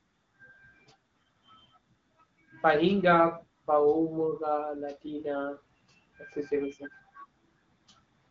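Speech clip; no technical faults can be heard.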